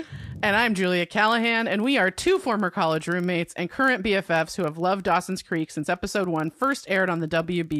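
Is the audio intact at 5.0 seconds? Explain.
No. At 5.0 s the speech carries the same fault that runs through the whole clip: a filter restarted on every block. The filter discards its internal state at each block boundary and begins again from silence, so every block opens with a small transient. These repeat at 25 Hz, pointing to blocks of about 40 ms, and blend into a low buzz whose strength rises and falls with the level of the speech.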